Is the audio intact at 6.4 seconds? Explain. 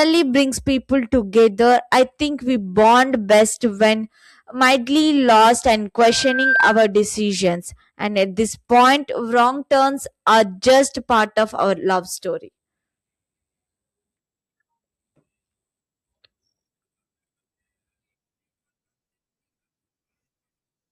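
No, 6.4 s falls inside a loudspeaker feedback squeal from 6.03 to 6.89 s: the mic picks up its own speaker, so a 1.6 kHz tone swells over about half a second to roughly the speech level.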